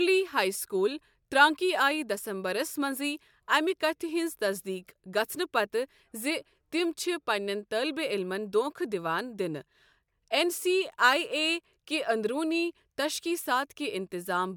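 No dropouts, clicks, distortion or level jumps turn up anywhere in this speech recording.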